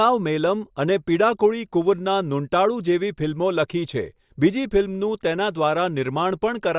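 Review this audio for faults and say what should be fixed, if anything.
Nothing to fix here: the speech comes through without any technical faults worth flagging.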